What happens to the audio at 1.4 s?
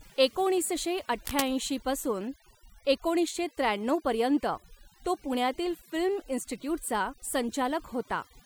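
From 1.25 to 1.48 s a burst of cable scratch noise sits over the speech, nearly as loud as the speech itself. It is dense, uneven rustling rather than a single click, likely from a worn connector whose contact resistance jumps as it moves. Beneath it, overdone noise removal runs throughout the clip. Frequency bands near the noise estimate are pushed down, leaving twinkling specks in near silence.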